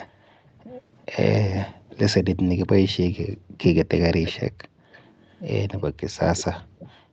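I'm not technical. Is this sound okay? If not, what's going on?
No. Faint delayed repeats of the speech trail behind it at 0.07–0.15, 0.73–1.06, 3.55–3.6, 3.96–4.34, 4.78–5.41, 5.78–5.82 and 6.18–6.87 s, about a third of a second late, clearest around 4 s. This is echo leak, likely one caller's loudspeaker sound returning through their microphone.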